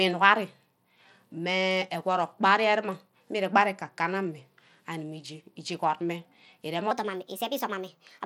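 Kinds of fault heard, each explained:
Bluetooth SBC compression: Throughout the speech there is plainly audible codec damage that likely comes from SBC. It sounds like a low bitrate, around 96 kbps. The coarse sub-band quantisation adds grit and a flickering top end.
Section at the wrong speed: From 6.91 s to the end, the speech plays 1.25 times too fast, so pitch rises by roughly four semitones as it hurries. This is likely playback against the wrong clock, which shifts speed and pitch together.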